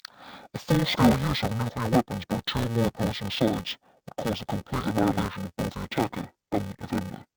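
From start to finish, the speech carries an interleaved-audio-read-as-planar fault. Each block of alternating left and right samples is split in half, the first half sent to the left channel and the second to the right, so both play at half speed within the block. Blocks here are 128 samples, or 2.9 ms, which fits a 44.1 kHz stream. At that size there is no clear octave drop. Instead the speech sounds dull and robotic, with a buzz at the 345 Hz block rate.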